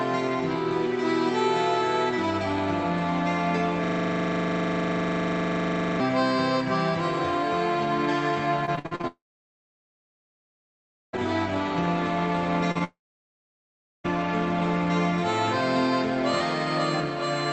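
From 3.84 to 6.00 s the sound collapses into a steady, rasping buzz at 25 Hz. A single 40 ms fragment repeats exactly, over and over. This is a system hang loop: the machine or driver froze while the audio hardware kept replaying the same ring buffer.

Between 8.65 and 9.05 s the audio turns choppy, with a rapid series of holes. The longest is about 53 ms, and roughly half the span is filled in. This is repeated packet loss. Each missing packet was patched by stretching the last sound, and the next loss followed almost at once.

Right after, from 9.07 to 11.15 s, a long network dropout sets in. A brief fading continuation gives way to nearly 2 s of silence, and the audio then resumes further on with the missing stretch gone. The likely cause is the stream stalling on the way to the receiver.

At 12.71 to 12.77 s there is a short smear where about 40 ms of audio was lost. This is short concealed packet loss: the receiver extrapolated from the preceding sound and blended back into the real signal.

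A second long network dropout runs from 12.84 to 14.06 s. The audio stops and leaves about 1.1 s of silence before picking up past the lost portion. Throughout, the top end stops near 8 kHz, which fits an Opus call codec.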